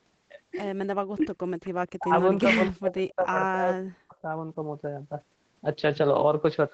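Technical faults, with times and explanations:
1.13–1.31 s, 1.99–2.12 s, 2.42–3.35 s and 3.54–4.28 s, speech suppressed in double talk: the speech dips sharply, by roughly 25 to 40 dB at its deepest, in short bites and longer stretches. This is likely an echo canceller mistaking overlapping talk for loudspeaker echo and attenuating everything.
3.10–3.15 s, echo leak: a brief, faint copy of the speech returns about 264 ms late, roughly 30 dB below the direct sound. This is likely residual loudspeaker pickup that the far end's echo canceller failed to remove, which was then sent back down the call.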